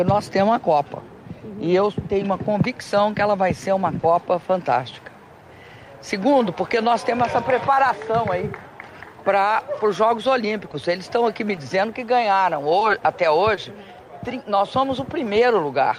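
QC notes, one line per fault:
3.99–4.05 s, short concealed packet loss: about 40 ms of audio never arrived, so the receiver extended the preceding sound and then cross-faded back. This is heard as a brief smear. A spectrogram shows repeated, slightly blurred harmonics or flat noise in place of detail.
10.71–10.75, 11.55–11.59, 12.79–12.83, 13.55–13.59 s, short concealed packet loss: each gap is about 20 ms and is patched the same way, giving a quick smear or wobble with a smeared strip.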